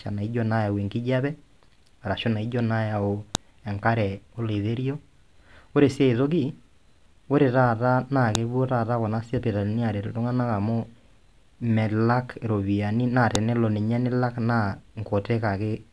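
At 3.35 s, 8.35 s and 13.35 s, sharp clicks cut through the speech. This is a file header played as audio. Joined pieces kept their headers, so those bytes play as samples. The snaps land every 5 seconds, matching the piece length.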